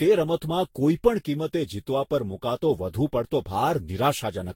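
Generation loss runs through the whole clip: the speech sounds swirly, smeared and hollow, with blurred consonant attacks and nothing above 16.7 kHz. The likely cause is repeated lossy re-encoding, around seven passes, at a rate that fits roughly 64 kbit/s, each pass stacking fresh quantisation noise and spectral holes.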